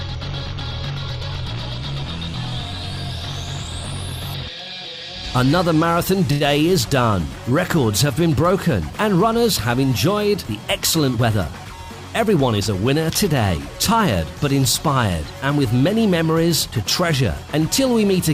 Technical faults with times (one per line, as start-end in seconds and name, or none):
6.31-6.43 short stall from a late packet
11.18-11.77 jitter buffer speed-up
12.19-12.69 jitter buffer speed-up